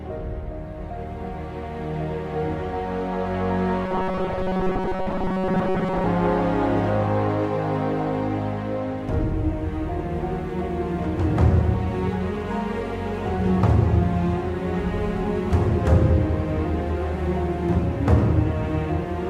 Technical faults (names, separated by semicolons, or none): robotic sound from repeated short buffers